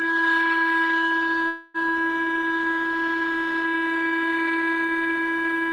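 From 0.27 to 0.90 s the music shows hard clipping: peaks are driven about 1 dB past what the chain can pass and are cut flat. It is a light crackle on loud moments. The waveform shows squared-off tops, and the spectrogram shows faint high-frequency streaks at each peak.

From 1.47 to 1.90 s there is a call audio freeze. For about 270 ms the last sound is held as a smeared, fading buzz that never drops to silence. The likely cause is delayed packets draining the jitter buffer. The music then resumes where it stopped, with nothing lost, so everything after plays about 270 ms late. The spectrogram shows a stretch of smeared, horizontally frozen bands with no new onsets, and the waveform shows a repetitive, decaying envelope.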